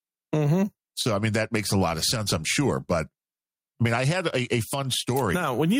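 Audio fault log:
Throughout, gain pumping: the input gain is likely set far too high, with a fast limiter pulling it back on each loud sound, so the level swings by around 10 dB. Loud and soft parts end up closer in level, leaving the speech squashed.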